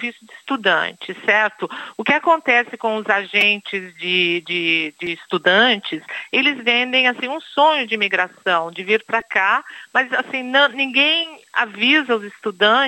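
The playback device was starved of new audio three times and fell back on repeated buffers, replaying its last block of about 2.7 ms, which fits a 128-sample buffer. At 3.41 s and 9.21 s the same fragment loops four extra times, and at 5.06 s twice. The pieces are too short to hear as a stutter, so each event comes across as a brief click or buzz. Roughly 10 ms, 5 ms and 10 ms of the audio are lost.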